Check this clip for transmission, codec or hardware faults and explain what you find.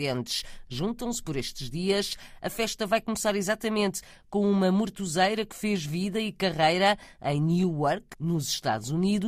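Nothing to flag here; the speech holds up all the way through without a single fault worth pointing to.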